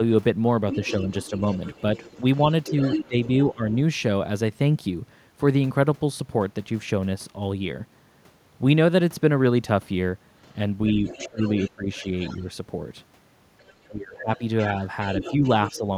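An echo canceller that likely failed to remove the far end's loudspeaker sound from the microphone lets the other side's voice leak through from 0.71 to 3.75 s, about 10 dB below the talker. It sounds like a second voice behind the speech. Where both sides talked at once, the canceller likely could not separate them and turned the talker down too. This speech suppressed in double talk comes in brief dips of up to about 15 dB between 2.71 and 3.61 s. More leakage follows from 10.88 to 12.42 s, about 20 dB down, with the talker ducked by up to about 20 dB from 11.18 to 12.46 s. Leakage returns from 13.59 to 15.78 s, about 15 dB down. The talker cuts back by up to about 15 dB from 13.87 to 14.42 s, then dips slightly from 15.3 to 15.84 s.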